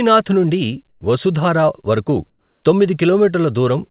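Comfort noise in place of the background at 0.89–1.01 s, before "వసుధారా వరకు", and 2.30–2.63 s, after "నుండి వసుధారా వరకు": the sender likely paused transmission, so flat synthetic hiss, about 7 dB and 4 dB quieter, replaces the real background, all within the call's 4 kHz bandwidth.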